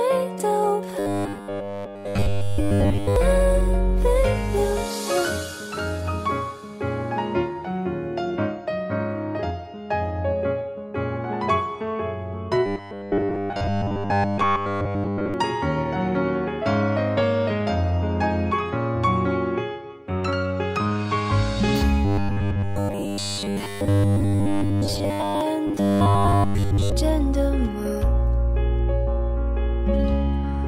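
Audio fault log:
0.99–3.16 s, 12.66–15.34 s, 22.05–25.41 s and 25.67–26.92 s: robotic sound from repeated short buffers, a rigid metallic buzz at 100 Hz, total in the first and third stretches and partial in the others. Likely cause: audio arriving too seldom, so a 10 ms piece is replayed in place of the missing sound.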